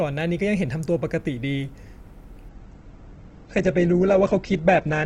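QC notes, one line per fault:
2.49–5.06 s, adaptive stream at a lower bitrate: from 2.49 s to the end, the speech switches without any gap to a noticeably duller, more processed rendition. Everything above 8.2 kHz disappears. The stream fell back to a cheaper encoding when throughput dropped, and the abrupt quality change sounds like a step down from roughly 64 kbit/s to about 12 kbit/s Opus.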